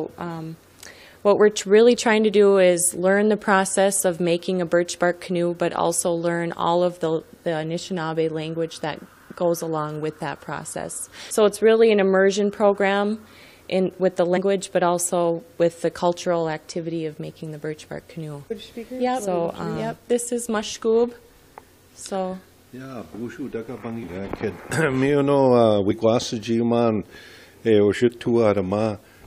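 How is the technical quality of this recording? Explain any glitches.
The recording has four short glitches from compressed frames skipped, at 11.30 s, 14.36–14.38 s, 24.02–24.04 s and 25.90–25.92 s. At each one, whole blocks of encoded audio never play. The block length is about 23.2 ms. So the sound jumps ahead by a few frames, roughly 70 to 200 ms.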